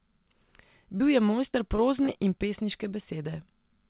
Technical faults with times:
0.98-1.02 short concealed packet loss
1.52-1.80 short concealed packet loss
2.06-2.09 short concealed packet loss

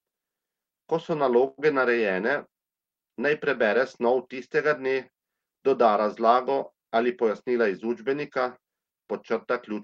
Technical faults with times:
1.47-1.60 call audio freeze
6.88-7.29 jitter buffer speed-up

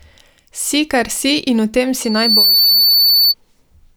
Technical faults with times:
2.04-3.34 loudspeaker feedback squeal

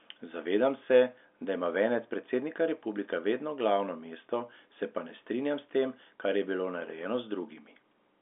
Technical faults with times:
none

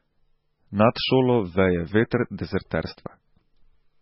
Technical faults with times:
0.00-4.01 MP3 compression

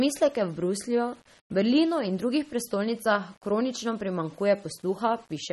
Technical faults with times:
0.00-5.53 low bit depth without dither
0.00-5.53 MP3 compression

